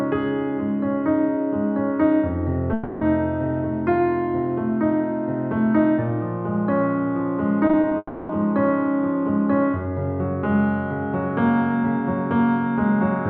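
From 2.73 to 3.03 s the sound stops being fresh and becomes a smeared, fading continuation of itself for roughly 0.3 s before normal audio resumes with that stretch gone. This is a long network dropout, likely caused by a run of audio that never arrived and was covered by extending the last sound.

Between 7.67 and 7.93 s the audio turns choppy, with four brief holes of up to 20 ms each. About a third of that span is patched rather than real. This is repeated packet loss, where each late or lost piece is filled by stretching what came just before.

Right after, from 7.97 to 8.31 s, a second long network dropout follows, likely from the same unstable connection. A fading smear covers about 0.32 s and ends in a brief 20 ms moment of silence before the audio returns without the missing part.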